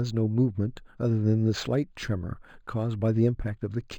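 Throughout the speech, imaging from linear upsampling shows: the 11 kHz material was raised to 48 kHz by straight-line interpolation, leaving a dulled top and a faint mirrored band between roughly 5.5 and 11 kHz, about 30 dB down, heard as metallic shimmer on sibilants and visible on a spectrogram as a reflected copy.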